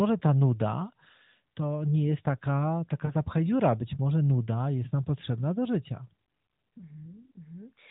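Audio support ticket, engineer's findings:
Lost AMR speech frames at 3.06–3.13 s, right after "to nie jest taka". About 40 ms of concealed sound, consistent with two consecutive dropped 20 ms frames. Smeared, drawn-out tone with fading level. Decoder repeated last good pitch and vocal tract parameters at reduced gain. Second event at 6.78–6.84 s: brief dip, likely a single lost frame. Probable component: radio link corrupting frames. The narrowband band limit and light buzz fit the AMR-NB 12.2 kbps mode.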